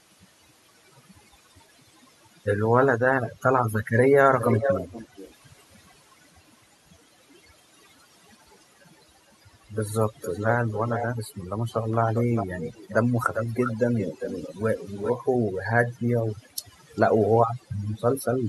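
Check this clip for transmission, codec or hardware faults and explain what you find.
Two faults are present. Overdone noise removal runs through the whole recording, and echo leak returns in six bursts.

Overdone noise removal, throughout: a suppressor set too hard pulls individual frequency bands down to nothing whenever they resemble its noise estimate. It strips the quieter parts of the speech along with the hiss, leaving near-silent gaps speckled with twinkling artefacts.

Echo leak, at 4.39–5.34 s, 8.98–9.31 s, 10.2–11.06 s, 11.76–12.94 s, 13.34–15.11 s and 16.96–17.01 s: a delayed copy of the speech trails it by 459 ms in the first three bursts and 401 ms after that. It is fairly strong at 4.39 s, moderate through the middle bursts and barely audible at 8.98 s and 16.96 s. The likely cause is a far-end loudspeaker echo canceller letting its microphone pickup through.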